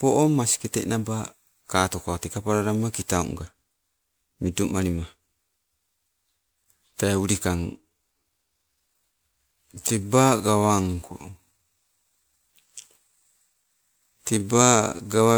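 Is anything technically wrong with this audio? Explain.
Yes, this speech clip has two faults.

Generation loss runs throughout. The audio was likely encoded to MP3 at 128 kbit/s about four times over. Each pass requantised on a shifted frame grid, leaving swirly, hollow tone and blurred consonant attacks. A spectrogram shows flickering holes and a hard ceiling near 20.9 kHz.

A time-stretched section runs from 7.53 s to the end. Playback there is slowed to 0.652 times speed while pitch holds, likely by software repeating short grains. The sound drags. A waveform shows stretched envelopes, and harmonics stay level on the spectrogram.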